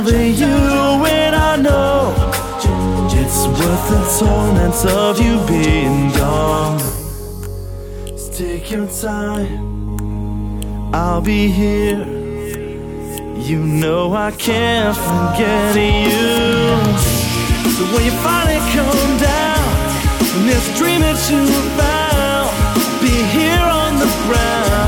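From 6.89 to 9.88 s, channel delay comb filtering: one channel lags roughly 20 ms, leaving fixed notches from about 30 Hz, rough and slightly doubled, unlike flanging.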